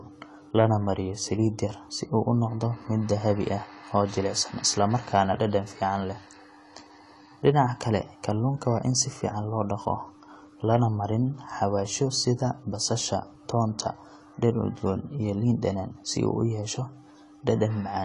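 This speech recording sounds dull and smeared throughout, with nothing above 11.5 kHz and a warbling texture on sibilants. The likely cause is AAC compression at a low bitrate, consistent with about 32 kbps. From 10.73 to 10.76 s, hard clipping flattens the peaks by about 2 dB, producing a brief crackle.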